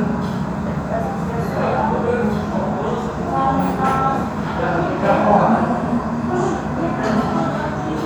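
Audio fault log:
No fault is audible anywhere in this clip of sounds. Nothing in the recording calls for a note in this log.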